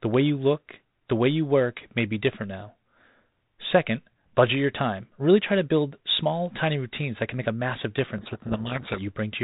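At 8.18 s, right after "can make a massive", the speech collapses into harsh, grinding distortion until 8.99 s: a codec payload misread, where the G.726 code words are decoded with their bits in the wrong order, so the difference values come out wrong. The band-limited telephone sound around it, which fits 32 kbit/s G.726, gives way to a dense, ragged waveform, and the spectrogram shows broadband smear filling the band below 4 kHz, with the speech harmonics lost.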